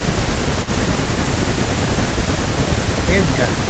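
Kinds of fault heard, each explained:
Echo leak: An echo canceller on a loudspeaker end of the call likely failed to remove everything its microphone picked up, so part of the far speech went back down the line. In this clip a brief delayed copy of the voice appears from 0.63 to 0.71 s, arriving about 367 ms after the original and sitting roughly 15 dB below the main speech, a short faint scrap rather than a sustained repeat.
Speech suppressed in double talk: With both sides talking at once, the echo canceller likely could not tell its own talker apart from the returning loudspeaker sound and turned everything down together. Here the voice dips from 0.64 to 0.68 s, overlapping the echo scrap, for about 40 ms in total, and at its deepest falls by around 5 dB, a slight momentary sag in level rather than a full dropout.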